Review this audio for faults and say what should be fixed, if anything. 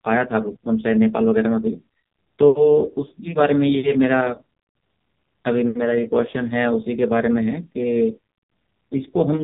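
AMR narrowband mobile codec damage throughout: nothing above 3.8 kHz, and a heavily buzzy, synthetic speech quality consistent with a low 5.9 kbps mode. Route the recording through a wideband path rather than a narrowband mobile link.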